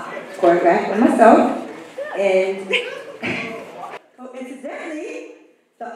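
From 3.97 s to the end, the level collapses by about 21 dB and the sound turns faint. This behaviour points to one channel inverted: with one stereo side likely carrying reversed polarity, summing to mono subtracts the shared content instead of adding it. What survives is only the small difference between left and right, heard as a faint residue of the original sound.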